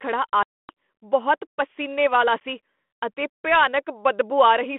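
Speech over what sounds like a 32 kbit/s G.726 ADPCM line has two bits of packet loss on an ADPCM call. From 0.43 to 0.70 s there's a hard-edged silent hole of about 260 ms, which points to a run of lost packets. When the audio comes back on "ਬਹੁਤ ਪਸੀਨੇ ਵਾਲਾ", the decoder's predictor and step size are out of step with the sender's, so the speech returns slightly distorted before it settles. A shorter 10 ms gap at 2.40 s, right after "ਬਹੁਤ ਪਸੀਨੇ ਵਾਲਾ", does the same thing on a smaller scale. Then at 3.67 s there's a single sharp click, most likely from dropped samples. The waveform jumps ahead by about a sample, far too little to take out any sound, but enough to leave a thin vertical tick across the spectrum.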